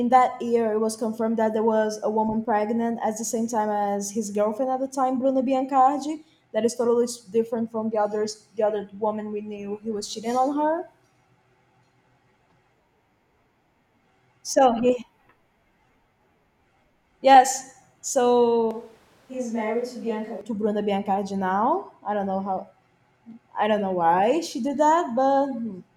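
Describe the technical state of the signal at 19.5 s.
At 19.5 s you're inside a switch to a distant microphone, 18.71 to 20.41 s: just before "to bruno biancardi now" the speech abruptly goes roomy, hollow and thin, dropping about 5 dB with more background noise, likely because a far-off mic replaced the close one, until it snaps back.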